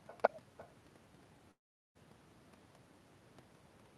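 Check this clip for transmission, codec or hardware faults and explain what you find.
Two faults are audible: an echo across the whole recording and one long gap in the middle.

Echo with no canceller, throughout: the far end's loudspeaker feeds its microphone and nothing removes it, so the speech returns after the network round trip, roughly 0.3 s late and about 17 dB quieter, as a thin shadow.

Long network dropout, 1.51 to 1.97 s: about 0.44 s of audio never arrived, likely from packet loss on the network. The receiver stretches the last sound into a fading buzz or hiss, followed by silence, and the speech resumes with that stretch missing.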